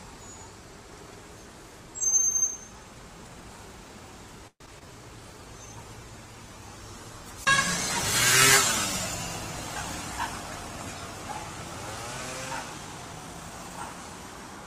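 A call audio freeze begins at 4.47 s and lasts until 4.62 s. The last sound is carried on for about 128 ms as a fading buzz or hiss, roughly 70 ms of which is silence. The audio then picks up where it stopped, so a gap has been inserted and nothing is lost, most likely because delayed packets let the jitter buffer run empty. Short concealed packet loss follows at 4.66 to 4.69 s and at 4.79 to 4.87 s. Each time about 20 ms of audio never reached the decoder, and the receiver bridged the hole by extending the preceding sound, from its pitch if voiced or as shaped noise if not, before blending back in, which leaves a brief smear or wobble. A call bitrate drop runs from 5.32 s to 12.55 s, with the encoder pushed from 64 kbps down to 17 kbps and held at the lowest rate for about 5.7 s. The coarser coding makes the sound rough, watery or muffled, clearing once the rate recovers near 12.55 s. 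A jitter buffer speed-up occurs from 12.78 s to 13.71 s. To shrink an oversized buffer, the receiver repeatedly cut out short pitch-period pieces, about a tenth of a second in all, so the audio runs at roughly 112% speed with unchanged pitch and sounds hurried.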